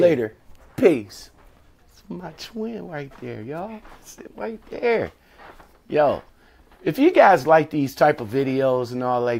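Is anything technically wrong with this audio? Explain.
No, there is nothing technically wrong with this audio that a listener can pick out.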